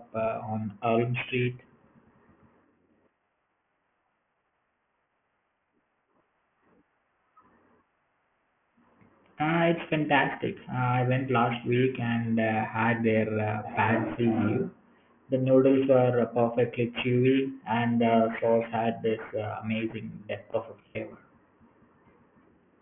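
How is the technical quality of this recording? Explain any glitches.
The quality isn't great, and there's one problem running through the whole recording.

Aliasing runs throughout. The speech was downsampled without a proper anti-alias filter, which fits a drop to a 6 kHz rate. Everything above 3 kHz folds back down as gritty, metallic junk, roughly 20 dB under the speech.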